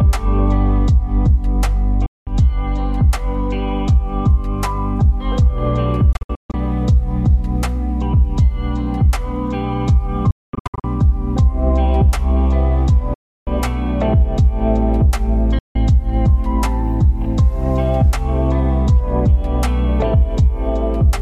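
Audio packets on the wireless link repeatedly failed to arrive in time and were discarded, which points to a likely Bluetooth dropout. The sound cuts to silence at 2.06–2.27 s, in scattered gaps across 6.13–6.54 s (longest about 0.14 s) and 10.31–10.84 s (longest about 0.22 s), then at 13.14–13.47 s and 15.59–15.76 s. Each hole opens abruptly or with a fade of a few milliseconds, and playback resumes further along, as though the missing stretch had played on unheard.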